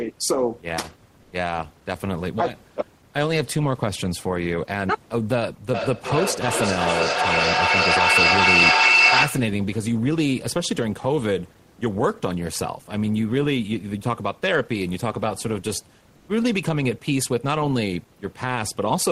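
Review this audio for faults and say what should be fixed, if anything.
Comfort noise in place of the background at 1.22 to 1.32 s and 16.16 to 16.28 s: for about 100 ms and then 120 ms, the room's natural background drops out and is replaced by a smooth, featureless hiss, roughly 1 dB louder the first time and about 3 dB quieter the second. The likely cause is Opus discontinuous transmission, where the sender pauses during silence and the receiver fills the gap with synthetic noise. The background sits about 35 dB below the speech. To prevent it, disable DTX on the sending side, or configure it so the generated noise closely matches the real room noise.

Feedback howl from 5.74 to 9.66 s: a second device on the same call picks up this one's loudspeaker, and each trip around the loop adds gain. The sound narrows to a piercing tone around 3 kHz that pulses at roughly 0.4 s intervals and peaks about 6 dB above the speech. 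To prevent it, keep only one device unmuted per room, or have participants in the same room use headphones.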